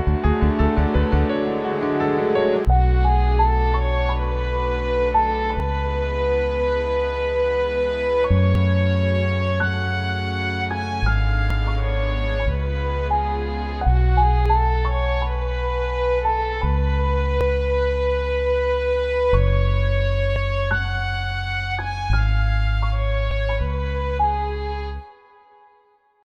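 The audio skips abruptly eight times, at 2.65, 5.6, 8.55, 11.5, 14.46, 17.41, 20.36 and 23.31 s, each a seamless jump losing about 50 ms. The even spacing points to audio missing between chunks, likely from roughly 3-second recording blocks.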